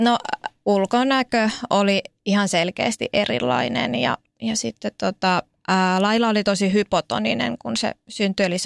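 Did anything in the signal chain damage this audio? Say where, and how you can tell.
No, nothing damaged this audio.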